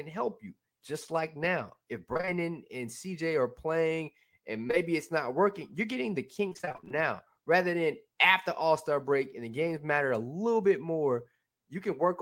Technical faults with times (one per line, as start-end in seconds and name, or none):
2.13-2.29 repeated packet loss (robotic sound)
4.67-4.75 short concealed packet loss
6.49-7.02 repeated packet loss (robotic sound)